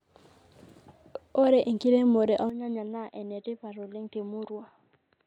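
At 2.50 s the speech abruptly turns dull and boxy, losing everything above 4.1 kHz, and drops by roughly 10 dB. It stays that way to the end. A faint new background noise comes in with it, around 50 dB below the speech, and there is no gap at the change. The likely cause is an input switched to a poorer device, such as another microphone or a headset's call profile, whose narrower band, different tone and own noise floor take over mid-recording.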